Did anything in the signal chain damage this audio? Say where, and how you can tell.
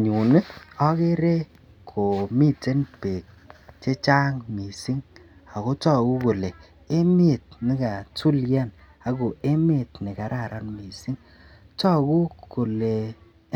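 No, nothing damaged this audio.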